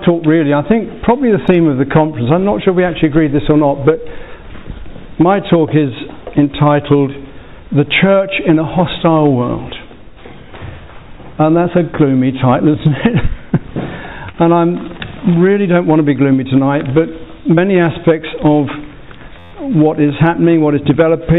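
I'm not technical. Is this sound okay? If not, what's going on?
No. There are two kinds of fault.

The first is short concealed packet loss, at 14.32 to 14.36 s and again at 17.56 to 17.59 s. About 20 ms of audio never arrived in time, so the receiver guessed by stretching out the sound just before the gap and then blended back in. You hear a tiny smear or wobble rather than a hard cut, and because the gap is patched with a guess, nothing repeats exactly.

The second is a system hang loop, from 19.39 to 19.52 s. The computer briefly froze while the sound hardware kept replaying the same tiny slice, about 12 ms long, 11 times over. Repeating that fast, about 86 times a second, it comes out as a short, steady buzz instead of a stutter, which fits a 512-sample buffer. Unlike the patched gaps, this is one exact copy played again and again.

The dull, telephone-like sound throughout, with nothing above 4 kHz, comes from the call connection itself.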